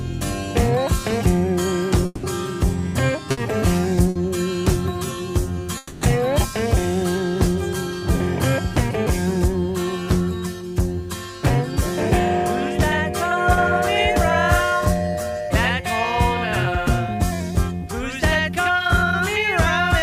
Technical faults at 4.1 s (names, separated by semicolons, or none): burst of packet loss